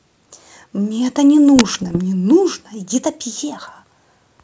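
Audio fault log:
1.56–2.00 s, bit errors on an ADPCM link: the G.722 speech breaks into pops and rough, gritty bursts with quick level jumps. A few bits per thousand got flipped, and each one knocks the decoder's step size and predictor off, so the damage rings on for some milliseconds.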